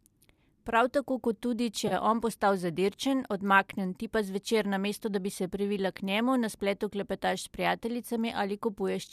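At 1.88 s, between "tako kot tudi če" and "je on postal zadirčen", there is a brief AAC frame loss with concealment. The damaged stretch runs to 1.93 s, and about 30 ms of audio is missing. That fits three lost frames of about 10 ms each. The decoder patches the hole from the last good spectrum. It reuses that energy with scrambled phase. The result is a short smeared, noisy blur in the speech. The gap is too short to fade to silence. The surrounding audio carries the light coding damage of low-delay AAC compression, likely AAC-ELD.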